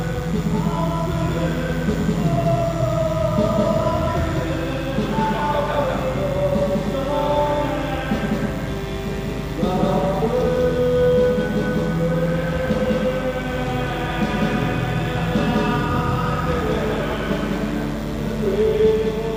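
From the very start and right through to the end, there's a doubled audio track: a second, equally loud copy of everything trails the original by roughly a fifth of a second. It's a flat, full-band repeat with no decay or room colour, so every onset gets a hard slapback. Most likely the signal is being picked up a second time through a slower path, or an edit left two out-of-step copies stacked together.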